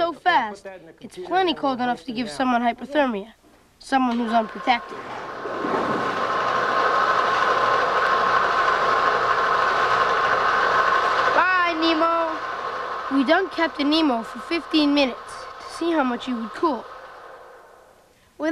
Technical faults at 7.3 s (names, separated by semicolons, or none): none